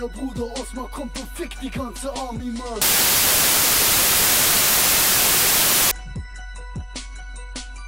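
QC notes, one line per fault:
2.82 to 5.91 s: samples built from the wrong bytes. For about three seconds the audio turns into loud, harsh broadband noise. The reader pieces each sample together from misaligned or swapped bytes. The rapidly changing low bits then dominate every value.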